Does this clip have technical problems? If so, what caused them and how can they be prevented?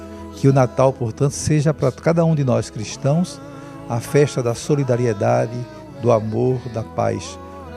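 No, nothing in this recording points to a technical fault, so there is no cause to trace and nothing to prevent.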